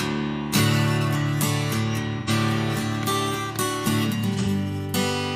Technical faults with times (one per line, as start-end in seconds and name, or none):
2.18-2.30 AAC frame loss with concealment
4.39-4.47 AAC frame loss with concealment